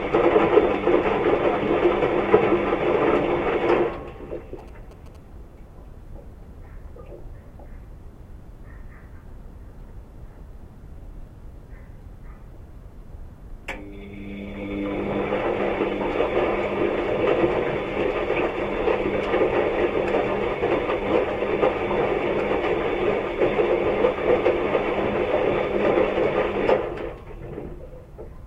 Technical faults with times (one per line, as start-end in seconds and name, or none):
4.59-5.17 GSM signalling bursts